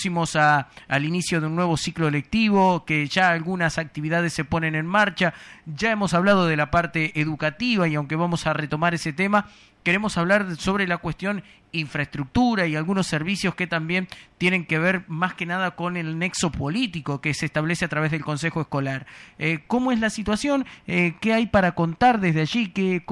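No technical faults can be heard anywhere in the recording. There are no dropouts, glitches or other disturbances at any point in the audio.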